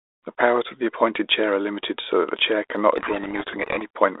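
Codec payload misread from 2.96 to 3.86 s: the decoder unpacks the G.726 code words with their bits in the wrong order, so each sample difference is misinterpreted, and the speech is buried in harsh, grinding distortion. Before and after, the narrow telephone band sounds consistent with 32 kbit/s G.726.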